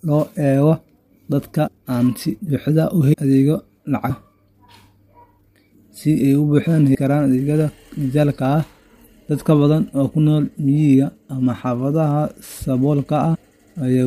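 At 1.66, 3.12, 6.94 and 13.34 s, compressed frames are skipped. The speech lurches forward by roughly 150 ms at the first and third points and 300 ms at the others, which fits runs of dropped frames about 26 ms long. Each join is a soft, smeared blip. On a spectrogram it shows as a brief vertical smudge, and on the waveform as an abrupt splice without a sharp click spike.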